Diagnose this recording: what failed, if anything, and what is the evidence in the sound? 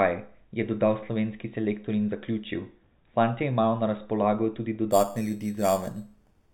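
The sample-rate conversion stage failed. From 4.91 s to the end at 6.54 s, the audio was upsampled by simply holding each sample, with no interpolation filter. The result is imaging from sample-and-hold upsampling. Above the speech there is a bright metallic fizz about 17 dB below the signal that rises and falls with it. Its lowest mirror copy fills 4 kHz to 8 kHz and moves against the pitch, which fits an 8 kHz source raised to 48 kHz.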